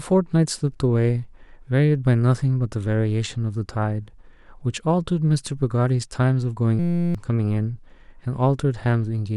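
At 6.79 s the speech freezes into a system hang loop lasting until 7.15 s. The playback device kept recirculating one tiny slice of its ring buffer while the host stalled, so a 5.8 ms fragment, which fits a 256-sample buffer, repeats some sixty times. Because the loop is so short, it is heard as a steady buzz at about 172 Hz. When normal playback resumes, around 0.4 s of the original audio is missing.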